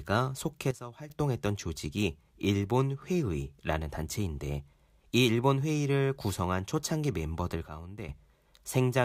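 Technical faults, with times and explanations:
0.71–1.1 s and 7.68–8.09 s, sudden gain jump: speech and background noise drop together, by about 12 dB, then about 10 dB. This is likely an unramped digital gain change.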